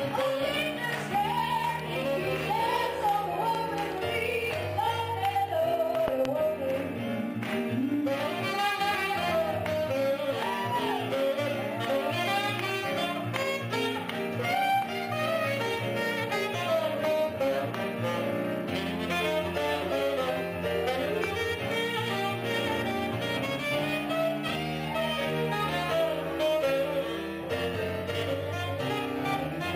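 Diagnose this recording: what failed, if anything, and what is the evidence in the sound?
Loud pops are audible in the analogue stage, with the sound continuing unbroken beneath each one. A single sharp pop at 3.55–3.57 s stands about 10 dB above the programme. A double pop spans 6.08–6.27 s and peaks near 20 dB above it. Another single pop at 21.24–21.26 s reaches roughly 15 dB. The likely cause is a voltage step or pulse from a connector, switch or static discharge, shaped by the following circuitry into these brief impulses.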